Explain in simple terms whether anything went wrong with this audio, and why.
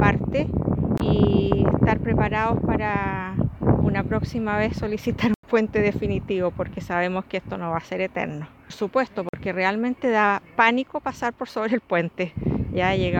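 The audio cuts out three times, each a block of digital silence. At 0.98 s it vanishes for about 23 ms, at 5.34 s for about 93 ms, and at 9.29 s for about 46 ms. Each is heard as a tick or short hole. The gaps are total silence, not a fade, and their lengths double neatly, which fits buffers of 1024, 4096 and 2048 samples that the program failed to fill in time.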